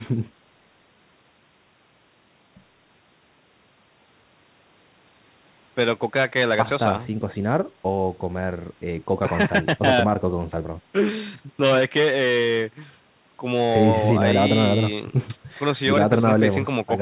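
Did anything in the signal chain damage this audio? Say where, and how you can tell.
No, nothing in the chain has damaged this speech. It carries the narrow telephone band of a G.711 mu-law call path, with nothing above 4 kHz, which is expected for that codec.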